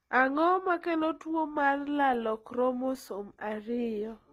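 Throughout the speech, the audio was likely passed through one lossy codec and then re-encoded by another, which fits an HE-AAC stage followed by Opus. This transcoding between lossy codecs leaves nothing above 15.7 kHz, and both codecs' artefacts are heard together.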